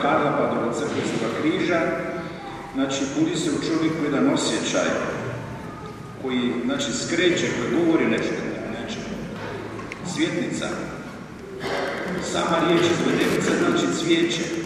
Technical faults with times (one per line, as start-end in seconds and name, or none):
11.63-14.66 Wi-Fi interference